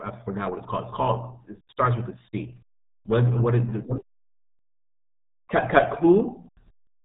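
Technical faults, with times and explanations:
Throughout: RealAudio 14.4 codec damage. The speech is squeezed through a very low-rate dial-up-era coder, which fits about 8 kbit/s. Nothing above roughly 3.8 kHz survives, so consonants turn dull and muffled, and heavy coarse coding leaves a gargly texture on every phrase.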